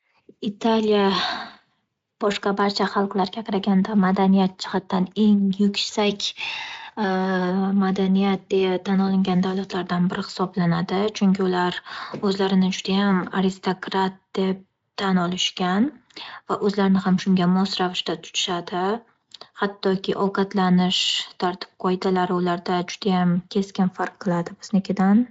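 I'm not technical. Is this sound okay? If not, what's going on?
Yes, nothing stood out as a problem when listening to this speech.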